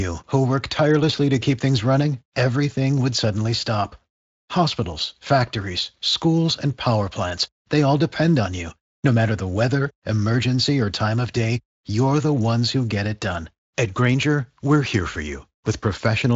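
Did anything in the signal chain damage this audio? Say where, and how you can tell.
No, nothing in the chain.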